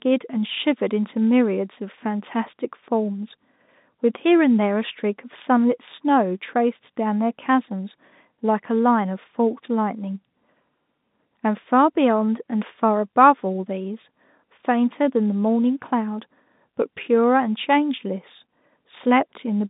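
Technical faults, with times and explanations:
No technical faults are heard, so there are no times or explanations to give.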